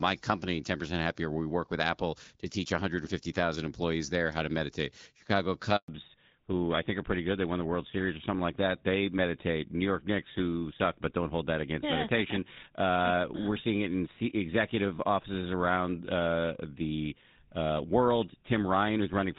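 At 5.76 s a handover gap cuts the speech for 120 ms, until 5.88 s. The call is being passed between networks and no speech frames arrive during the switch, so the sound dies away within a few tens of milliseconds and stays silent until the new link carries audio again.

From 5.88 s to the end there is a fallback to narrowband. Before it, the speech has clear wideband HD Voice, consistent with AMR-WB at around 12.65 kbit/s. Afterward nothing remains above 4 kHz, and the speech turns duller and rougher, which points to the older GSM full-rate 13 kbit/s codec taking over on the new link.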